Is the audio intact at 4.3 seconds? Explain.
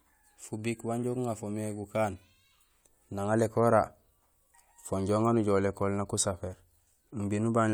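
Yes, at 4.3 seconds the speech runs through cleanly, with no dropout, click, distortion or other fault audible at that moment.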